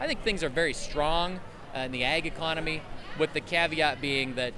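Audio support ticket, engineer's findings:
Nothing wrong turned up on this one; listened through and didn't hear anything that needs chasing.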